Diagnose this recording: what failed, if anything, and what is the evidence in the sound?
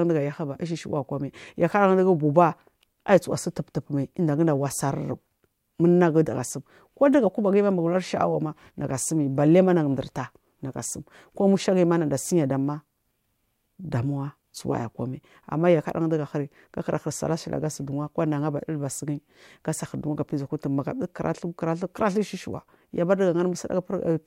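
Sample clock jitter, present throughout the speech: the fault sits at the converter stage, where the sampling clock wanders by something on the order of a microsecond, so each sample is taken fractionally early or late. The resulting error tracks the waveform's slope, adding a faint hiss and roughness roughly 45 dB below the signal that thickens on loud, bright syllables and sibilants, then disappears in the pauses between phrases, which rules out a steady noise floor.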